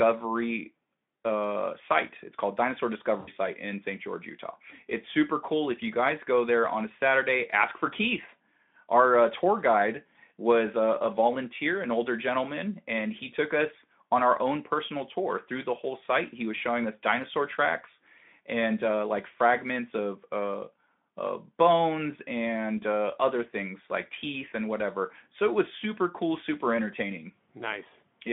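Around 3.19 to 3.3 s there's VoIP packet loss concealed by the speech codec: roughly 80 ms went missing, and the decoder stretched the last sound into a buzzy tone or coloured noise that fades.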